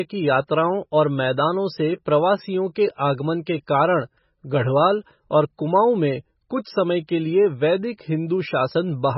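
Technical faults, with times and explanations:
Throughout, MP3 compression, likely: the speech has nothing above 5.6 kHz and sounds heavily watery and swirly as weak frequency lines drop in and out between frames, which fits a starved bitrate near 16 kbps. A spectrogram shows a flat ceiling at 5.6 kHz with flickering gaps below.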